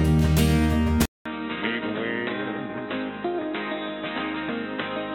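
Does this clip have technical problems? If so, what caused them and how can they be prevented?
Yes. At 1.06 s the audio drops out for about 200 ms, and when it returns it stays band-limited to nothing above 3.9 kHz until the end, sounding dull and boxy, roughly 10 dB quieter, with a new noise floor sitting roughly 30 dB below the signal. That pattern most likely points to the input switched to a poorer device, such as a headset falling back to its call profile. To prevent it, lock the recording input to one microphone and disable automatic device switching.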